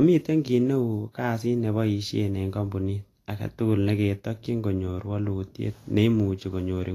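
From start to finish the speech carries plainly audible damage, likely from Vorbis compression. Nothing is heard above 14.2 kHz. The treble just below that edge sounds hissy and grainy. Fine high detail has been replaced by noise of similar energy. Consonant attacks lose their edge. Voiced tones take on a rough texture. The depth of this damage points to a low bitrate, in the region of 30 to 40 kbps.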